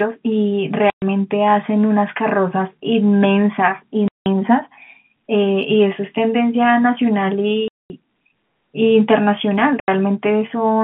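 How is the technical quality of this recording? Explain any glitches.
The speech is broken by four short dropouts, heard through telephone-band G.711 coding that limits it to roughly 150 Hz to 3.5 kHz. Packet loss filled with silence occurs at 0.9 s (120 ms), 4.08 s (180 ms), 7.68 s (220 ms) and 9.8 s (80 ms). Lost packets are replaced by digital silence, leaving abrupt holes with hard edges, in lengths that fit 20 ms packets.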